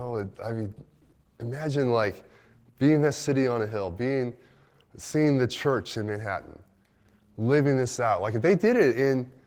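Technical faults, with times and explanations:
Throughout, Opus voice compression: hoarse, faintly robotic speech with grainy highs, as the 16 kbps hybrid mode codes the excitation coarsely and the band above 8 kHz thinly.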